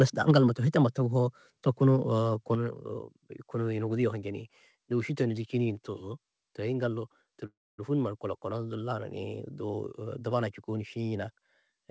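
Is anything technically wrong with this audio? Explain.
Yes, this speech clip has two faults.

At 2.55 s the level of the speech and the background drops by about 5 dB in one step: a microphone volume step-down. The likely cause is the call software deciding the input was too hot and lowering the device's input gain at once. On the waveform the envelope shrinks abruptly and stays smaller. On the spectrogram every band darkens at the same instant, right up to the 8 kHz ceiling imposed by the G.722 call path.

From 7.46 to 7.80 s there is a call audio freeze just before "numa du". For about 0.32 s the last sound is stretched into a fading buzz, and roughly 250 ms of that is near silence. This is likely because the packets were held up and the jitter buffer ran dry, so the receiver filled the gap. The speech then resumes where it stopped, with nothing lost but about 323 ms of extra delay. 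On a spectrogram this shows as a smeared, static band that decays into a blank stretch.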